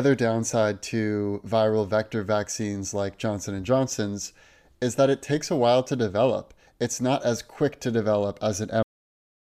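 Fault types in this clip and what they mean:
cut-off end: The last buffers were never written, so speech halts mid-sound at 8.83 s after "as quick to develop", dropping to digital silence without decay.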